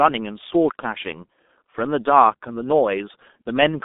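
From start to end, the speech carries heavy G.723.1 codec damage. Nothing gets through below 200 Hz or above 3.6 kHz. The sound is muffled and hoarse, and consonants blur together. That points to a coder near 6.3 kbit/s using long frames and slow voice-model updates.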